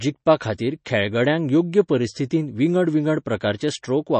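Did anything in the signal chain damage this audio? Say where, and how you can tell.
Yes, at the codec stage, throughout the speech. Nothing is present above 8.3 kHz, and the sound has a plainly audible watery, swirly texture. This is likely MP3 compression at a low bitrate, around 32 kbps, where the encoder cuts the treble and drops weak spectral lines frame by frame.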